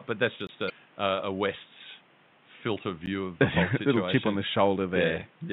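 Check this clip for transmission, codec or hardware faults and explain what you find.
Two kinds of fault turn up in this speech clip: two brief dropouts to dead silence and one garbled blip from corrupted compressed data.

The first block of digital silence runs from 0.47 to 0.49 s, a 20 ms hole. The second, at 3.06 s, lasts only 10 ms, too short to be heard as silence, and comes across as a tick or dip. In both, the signal drops straight to silence and returns without any fade. The likely cause is the playback program failing to fill its output buffer in time, so empty samples were sent instead.

Between 0.66 and 0.70 s there is a short garbled disturbance, followed immediately by "a a". This is damaged data in a compressed stream. Some bytes in that stretch were lost or corrupted, so the decoder misread the affected frames, lost its place, and had to search forward for the next valid frame header. 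The garbled decoding makes the disturbance. The faint room noise, about 33 dB below the speech, belongs to the recording itself.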